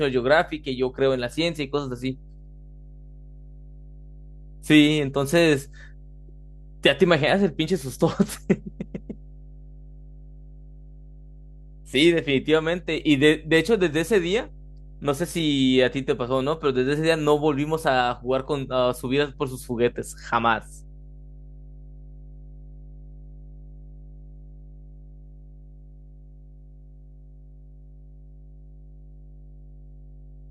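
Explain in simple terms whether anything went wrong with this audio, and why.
Mains hum runs through the whole clip, from the first second to the last. It is a steady, low buzz at 50 Hz that sits under the speech, fairly loud and easy to hear in the pauses. It happens when the electricity supply leaks into the recording, through a ground loop between connected equipment or from a nearby transformer, so the power line's own rhythm is recorded along with the sound.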